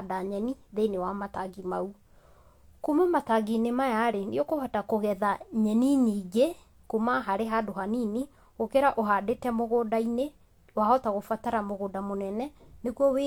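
No faults can be heard anywhere in the recording.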